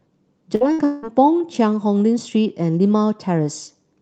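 At 0.55 to 0.64 s and again at 0.73 to 0.82 s the speech briefly freezes into a held, fading sound, then jumps ahead. Each is a burst of packet loss: the receiver stretched the last sound for about 50 to 60 ms, and roughly 60 ms of speech never arrived.

From 0.85 to 1.06 s a longer held sound fades across about 180 ms before the speech resumes, with about 180 ms of the original gone. This is likely a long network dropout, where the receiver kept concealing until audio arrived again. Throughout, the call codec's coding noise and a top end stopping near 8 kHz can be heard.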